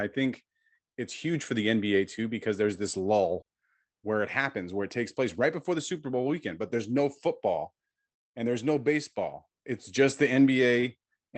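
From 3.23 to 4.05 s, after "too because there's this", repeated packet loss (robotic sound) leaves four gaps up to 40 ms, each patched by repeating the previous sound. It sounds choppy and robotic, and shows as smeared, repeated spectrogram blocks.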